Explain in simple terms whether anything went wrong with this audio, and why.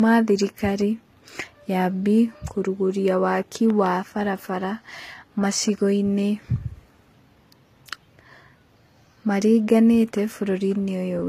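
Two things went wrong. Throughout the speech there is a mix of compression flaws heard together, with nothing above about 14.9 kHz, the sign of transcoding between lossy codecs. The speech was likely squeezed by one compressed format and then re-squeezed by another, so the flaws of both pile up.

Between 3.70 and 3.88 s there is a loud pop, actually two quick pops a little louder than the speech, which carries on underneath. That points to a sudden electrical jolt, likely from a plug, a switch or static, entering the signal.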